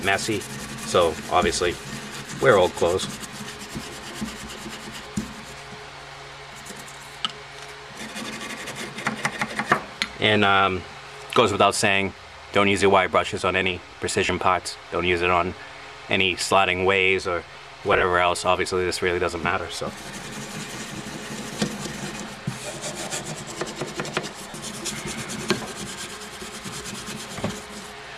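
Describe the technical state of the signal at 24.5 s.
Around 24.50 to 24.54 s there are lost LE Audio frames. The LC3 decoder papers over the 40 ms gap, about four frames' worth, by replaying the last spectrum with scrambled signs, so the sound turns into a brief noisy smear.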